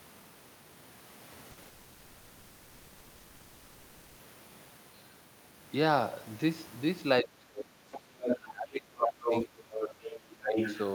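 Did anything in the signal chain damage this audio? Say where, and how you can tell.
Yes. A burst of packet loss hits at 1.51 to 1.59 s, a network-stage fault. About 60 ms of the speech never arrived, and the decoder stretched the preceding sound into a brief fading buzz or hiss before playback skipped ahead past the missing part.

A short concealed packet loss follows at 1.63 to 1.67 s, again on the network path. Only about 20 ms went missing, and the receiver patched it by extrapolating the last sound and blending back in, which is heard as a quick smear or wobble.

A long network dropout runs from 1.67 to 4.21 s. About 2.5 s of speech is replaced by synthetic continuation rather than true silence, with a held, decaying fill and no real content. This is likely a network outage, after which the audio resumes further along.

Speech suppressed in double talk appears from 7.22 to 9.78 s, dipping by about 25 dB at its deepest across roughly 2 s, and again at 10.38 to 10.58 s by about 15 dB. 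In call processing, the echo canceller likely mistook overlapping speech for echo and attenuated it.

The other side's voice is leaking through at 7.92 to 8.00 s, about 15 dB below the talker, then at 8.24 to 8.37 s, 9.01 to 10.2 s and 10.52 to 10.81 s at roughly equal level. This is likely residual loudspeaker echo that the canceller failed to remove from the microphone signal.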